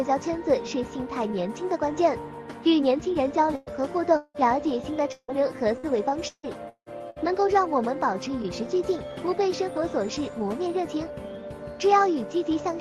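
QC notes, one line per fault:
3.55–3.70 s, burst of packet loss: The sound stops advancing for roughly 111 ms. The last fragment is stretched forward and fades rather than cutting to silence, so it comes across as a brief held buzz or hiss. Playback then picks up about 100 ms further on, and the material in between never appears. This is the pattern of several consecutive packets failing to arrive in time, with the receiver's concealment filling the hole.
3.67 s, lost packet rebuilt from error correction: Inside that burst, a single 20 ms frame is rebuilt and sounds grainier and noisier than the frames around it. There is no gap at this point. The decoder played the low-bitrate redundant copy carried in the following Opus packet in place of the lost original. The roughness comes from that reduced-rate copy. Because the call path is already band-limited to about 12 kHz by Opus at 32 kbps, no separate high-frequency dip stands out here.
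4.17–4.37 s, long network dropout: A longer interruption. The final sound is extended as a decaying tail for about 177 ms, then about 30 ms of near-silence follows before the audio returns. Roughly 180 ms of material is skipped entirely. The length and the collapse into silence likely point to a stretch where no packets reached the receiver at all. Concealment ran out of useful history and handed over to quiet before the stream resumed.
5.12–7.33 s, repeated packet loss (robotic sound): Over this 2.2 s span the sound turns choppy, with pieces missing. Five separate holes each get patched by repeating the preceding sound, and each patch is followed quickly by the next. About 593 ms is concealed, roughly 29% of the span, and around 620 ms of content is lost outright. The longest single hole is about 170 ms. A few tens of milliseconds are recovered via error-correction copies, but not enough to smooth the passage.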